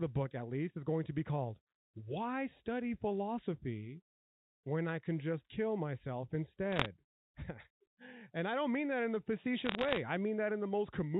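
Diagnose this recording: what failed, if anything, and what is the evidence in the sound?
Bit errors on a digital phone line, in transmission: sharp ticks and crackle at 6.72–6.86 s and 9.66–10.00 s, where flipped bits in the G.711 stream corrupt individual samples.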